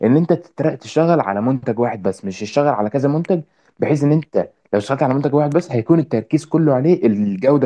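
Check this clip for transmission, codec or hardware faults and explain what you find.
Nothing in this speech recording points to a fault. There is nothing here to explain.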